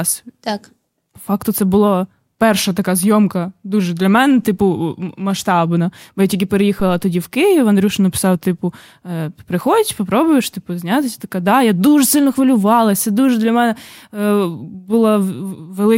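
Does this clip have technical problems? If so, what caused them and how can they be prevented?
Yes. Just after "я тільки", from 6.80 to 7.11 s, a deep low thump peaks at about -16 dBFS and dies away within roughly 71 ms. This is a phantom power thump: switching the supply on a live input sends a voltage step through the coupling capacitors. To prevent it, mute the channel or pull the fader down before toggling phantom power.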